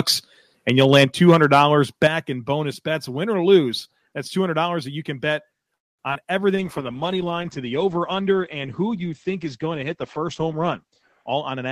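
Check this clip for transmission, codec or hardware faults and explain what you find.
The clip is speech, and it has several faults: microphone overload, two microphone volume steps, a call audio freeze, short concealed packet loss, a jitter buffer slow-down, a call bitrate drop and a jitter buffer speed-up.

Microphone overload occurs from 0.69 to 1.62 s, with peaks about 6 dB over the limit. It returns briefly from 2.04 to 2.07 s, about 2 dB over. The likely cause is an input gain set too high, so the loudest peaks hit the converter's ceiling. Their tops are flattened, and a small share of samples is clipped. The loud syllables gain a harsh, crackling edge.

The microphone volume steps down twice. At 1.05 s the level falls by about 6 dB. At 2.08 s it falls by about 7 dB, just before "in bonus bets". Each drop follows a clipped peak. This likely comes from the call software detecting overload and cutting the device's input gain in one step. 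The voice and the background drop together, suddenly.

A call audio freeze runs from 5.75 to 6.01 s, right after "that you can bet". The likely cause is delayed packets draining the jitter buffer. The receiver stretched the last sound briefly and then went nearly silent for about 230 ms. When the packets arrived, the audio resumed where it stopped. Nothing is lost, but a gap of about a quarter second is inserted.

Short concealed packet loss follows at 6.11 s and from 6.13 to 6.17 s, also after "that you can bet". About 20 ms and then 40 ms of audio never reached the decoder in time. The receiver patched each hole by extending the preceding sound and blending back in. The result is a brief smear or wobble, and a quick consonant may vanish.

A jitter buffer slow-down runs from 6.51 to 6.93 s. The buffer was running low or had just raised its target delay. To rebuild a reserve, the receiver repeated pitch periods many times in a row. 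This added about 37 ms. The speech plays at 93 % speed with unchanged pitch. Sounds are slightly drawn out.

A call bitrate drop starts at 6.57 s and lasts to the end. The bitrate falls from 48 to 11 kbps and stays at its lowest for about 4.8 s. The bandwidth estimate collapsed, so the encoder coded more coarsely. It also cut the audio band from 20 kHz to 8 kHz. The voice turns muffled and rough, with a watery texture.

A jitter buffer speed-up runs from 11.22 to 11.69 s. The buffer held more audio than its target. To cut the delay, the receiver removed short pitch-period chunks many times in a row. Roughly a tenth of a second disappears. The speech runs at 122 % speed, still at the same pitch. It sounds hurried.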